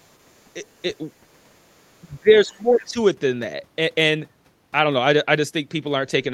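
Speech here, with faint scraps of the other side's voice leaking through at 0.00 to 0.13, 0.31 to 0.41 and 0.69 to 0.95 s, way down under the talker. It's probably echo the canceller didn't fully remove from the loudspeaker, and a louder bit pokes through at 2.78 to 2.85 s. From 2.03 to 2.99 s the talker gets pushed down by about 20 dB in pieces across most of that stretch, likely speech suppressed in double talk while both sides overlapped.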